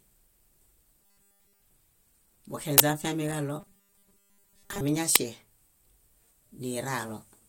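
Speech, and it has two kinds of trouble. From 1.01 to 1.63 s and again from 3.60 to 4.81 s you get robotic sound from repeated short buffers: the voice collapses into a stiff, metallic 200 Hz buzz that only loosely tracks the talking. That pitch is one over a 5 ms chunk, so the likely cause is audio arriving too slowly and the player looping the last 5 ms to fill the gap, with most of the real material skipped. Separately, there are two uninitialised buffer bursts, one from 2.78 to 2.80 s lasting 20 ms, and one at 5.16 s lasting 5 ms. The 20 ms one is a sudden, harsh blast of digital noise and the 5 ms one a loud crack, which is what you hear when a buffer goes out to the output before any audio has been written into it and whatever junk was sitting in memory gets played as samples.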